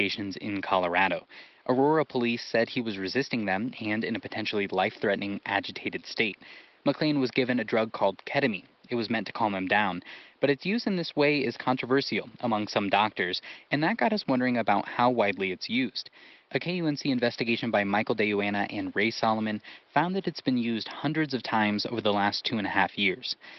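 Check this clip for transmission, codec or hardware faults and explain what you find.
No transmission, codec or hardware faults found here.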